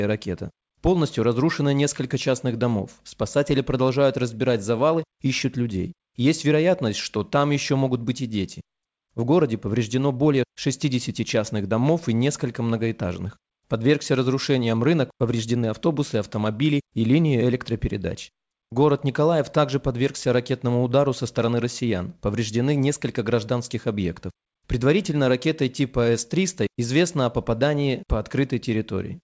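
Speech, with no technical faults audible anywhere.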